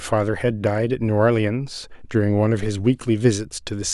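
No technical faults detected anywhere in this speech recording.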